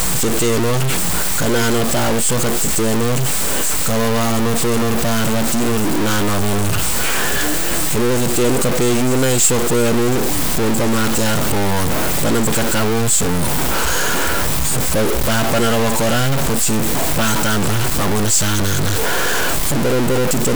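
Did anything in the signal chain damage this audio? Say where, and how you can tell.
Yes: a stuck bit, likely at the converter, distorts the speech harshly throughout. Waveform steps of about -10 dBFS and broadband spectrogram noise filling the pauses point to a high bit.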